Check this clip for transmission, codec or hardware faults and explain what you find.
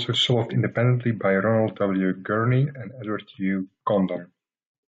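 Nothing in this speech recording stood out as a problem on listening.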